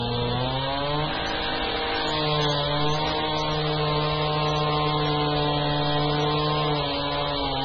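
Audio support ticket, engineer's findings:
Whole clip: watery, swirly texture, smeared attacks, nothing above 6.9 kHz. Likely heavy MP3 compression, around 16 kbps. Encoder cut treble and dropped weak frequency lines.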